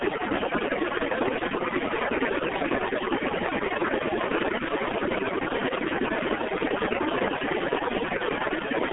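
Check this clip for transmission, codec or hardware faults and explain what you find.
Two faults run through the whole clip, stacked on top of each other.

First, overdone noise removal from start to finish. The suppressor was pushed too hard, so bands near its noise estimate get pulled right down, taking the quiet edges of the speech with them. You hear near-silent gaps with twinkly specks.

Second, the G.723.1 codec throughout, and the damage is heavy. It's a narrowband telephone path of roughly 250 Hz to 3.4 kHz, with nothing above 3.8 kHz, which fits a low-rate stream around 6.3 kbit/s. Its slow-updating voice model leaves the speech muffled and hoarse, with smeared consonants.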